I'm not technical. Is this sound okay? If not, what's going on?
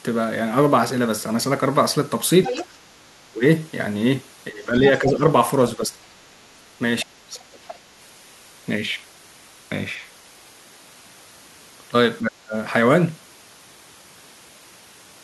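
No, there are two problems. Twice, at 2.43 to 2.67 s and again at 7.53 to 7.74 s, you can hear a faint second voice in the background for a brief moment. The second time it is fainter than the first. This is the other side's voice leaking through. The person's device is probably playing the call on a loudspeaker, and the part of the device meant to cancel that sound before it reaches the microphone likely missed some of it.

The main voice also keeps sinking or briefly vanishing. This happens at 3.3 to 3.44 s, 4.5 to 5.23 s, 5.77 to 6.05 s, 7.04 to 7.44 s and 12.2 to 12.54 s. The dips at 3.3 s, 7.04 s and 12.2 s are deep, close to dropping out completely. The dip at 4.5 s is milder but lasts longer. This is speech suppressed in double talk. Both people were likely talking at once, and the echo cancelling could not tell the voices apart, so it turned everything down.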